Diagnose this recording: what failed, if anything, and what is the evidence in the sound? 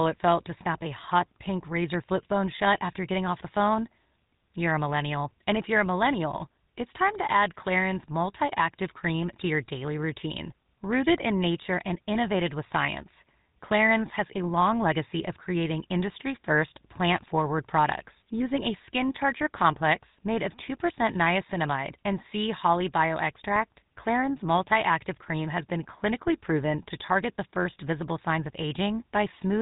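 Codec stage: the speech went through a GSM full-rate codec, whose pulse-excited vocal-tract model leaves buzzy, gravelly roughness throughout and nothing above 3.8 kHz.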